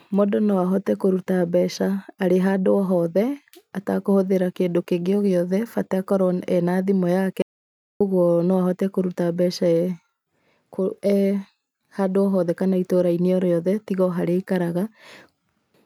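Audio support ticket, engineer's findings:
Audio dropout to silence, 7.42 to 8.01 s. Speech cuts off mid-flow, then resumes abruptly. Gap of about 0.58 s is silent, with no room tone. Content in that span is lost. Likely cause: input path interrupted briefly, via device disconnect, link failure or stray mute. Recorder kept writing silence.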